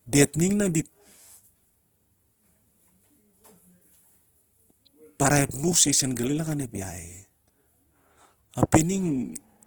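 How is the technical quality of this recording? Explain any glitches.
The technical quality is limited by plainly audible compression damage across the whole clip. Throughout, the speech has a grainy, rough, noise-filled texture, most likely from Opus compression in its music (CELT) mode at a low bitrate, around 16 kbps. Starved bands are refilled with folded or noise content. Unlike MP3, it leaves few spectral holes and swirls less, and the bandwidth stays full, reaching about 20.4 kHz.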